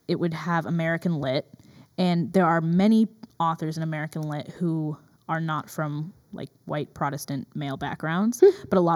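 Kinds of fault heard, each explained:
Channel delay (comb filtering): a hollow or phasey colour throughout, with fixed notches starting around 3 kHz, because one channel lags roughly 0.2 ms before the mono sum.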